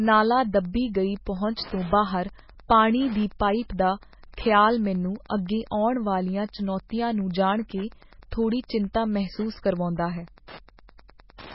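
From start to finish, Wi-Fi interference runs under the speech as a steady ticking about ten times a second. A nearby Wi-Fi radio's beacon, repeating every 102.4 ms, is being picked up and rectified by the audio circuit, sitting roughly 25 dB below the speech. On a spectrogram it shows as a row of thin vertical lines at even 102.4 ms spacing, and in the waveform as small regular spikes riding on the signal.

Across the whole clip there is also heavy codec damage, likely from MP3 compression at a very low bitrate, which fits about 16 kbps. Nothing survives above 5.6 kHz, so the treble is cut off and the speech sounds watery and swirly, with metallic chirps on s sounds and smeared attacks. A spectrogram would show a hard flat ceiling at 5.6 kHz, with patches below it blinking on and off from frame to frame where weak frequency lines were dropped.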